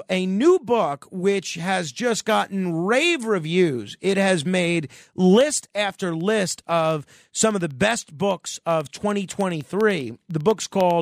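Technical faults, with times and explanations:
5.31 to 10.91 s, periodic USB or driver dropouts: starting just after "has made", a sliver of audio far shorter than a millisecond drops to silence every 0.1 s, giving an even ten-per-second ticking. Random glitches would be irregular; these ticks keep strict time and vanish in pauses.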